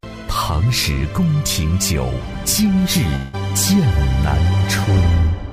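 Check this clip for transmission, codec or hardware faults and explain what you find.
One fault is audible, a long network dropout from 3.15 s to 3.35 s. The stream likely stopped delivering audio for about 0.2 s, and the receiver papered over the hole by extending the last sound it had for roughly 180 ms rather than going quiet. That stretch comes through as a fading buzz or hiss in place of real audio. When the sound resumes, about 180 ms of material is simply gone and never replayed.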